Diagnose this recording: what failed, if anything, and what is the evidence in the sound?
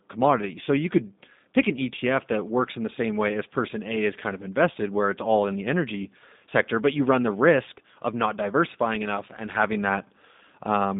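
The codec stage failed: the speech has passed through a G.729 codec for its whole length. It sounds slightly rough and synthetic, which fits an 8 kbit/s encoder that rebuilds speech from a vocal tract filter, a pitch predictor and sparse pulses. A spectrogram shows a band from 150 Hz to 3.7 kHz, with nothing above that sharp ceiling.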